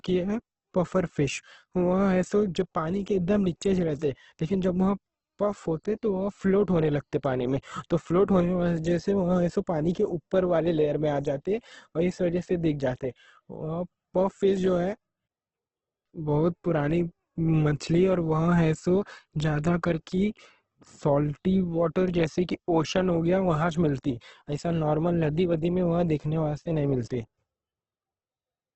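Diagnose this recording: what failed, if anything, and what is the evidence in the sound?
The codec stage is at fault across the whole speech recording, most likely heavy Opus compression running in its music (CELT) mode. Nothing survives above 8.2 kHz, and a spectrogram shows a hard ceiling there with grainy, noise-filled bands beneath it where the encoder substituted folded or synthetic energy for real detail. The speech sounds rough and grainy rather than swirly, and the damage fits a rate near 12 kbps.

Pre-echo appears at 9.93 s, also from the codec. A short hiss runs for about 16 ms ahead of a sharp onset, and the attack itself sounds softened. The transform spread its quantisation noise across the whole block, so noise budgeted for the loud attack leaked into the quiet stretch before it. On a waveform, low-level fuzz rises just before the transient. A spectrogram shows a broadband smear leading the onset.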